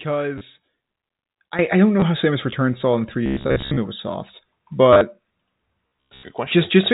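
A telephone-band speech recording, cut off above 4 kHz by its G.711 coding, shows three kinds of fault. Packet loss with the last packet repeated occurs at 0.38 to 0.41 s (30 ms), 2.00 to 2.02 s (20 ms) and 4.93 to 5.01 s (60 ms scattered over 80 ms, longest run 30 ms). Each is a brief stutter, consistent with 10 ms packets. On a waveform these appear as identical copied cycles with discontinuities, and on a spectrogram as vertical click lines. At 1.59 s a sudden gain jump of about 12 dB lifts speech and background noise together and holds to the end. The waveform envelope and the spectrogram's noise floor step up at one instant, likely from a gain change applied without a ramp. Robotic sound from repeated short buffers runs from 3.26 to 3.79 s and 5.87 to 6.23 s. Most of the audio there is replaced by repeats, giving a rigid metallic buzz at 66.7 Hz. This fits a 15 ms buffer, likely starved of new input. 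A spectrogram shows evenly spaced horizontal harmonics of 66.7 Hz, and the waveform shows a strictly periodic repeating block.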